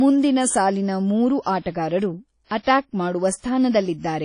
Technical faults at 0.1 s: WMA compression

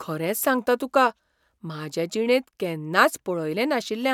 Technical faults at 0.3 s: none

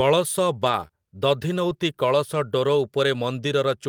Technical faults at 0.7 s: lost packet rebuilt from error correction

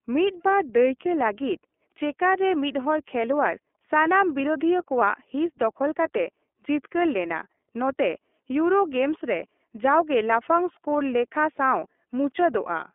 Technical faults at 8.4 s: iLBC codec

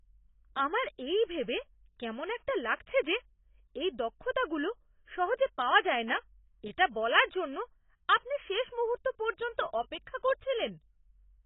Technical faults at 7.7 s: AAC compression

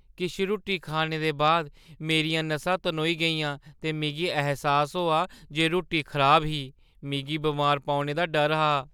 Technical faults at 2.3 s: none

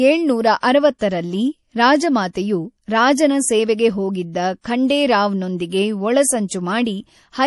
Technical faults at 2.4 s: MP3 compression

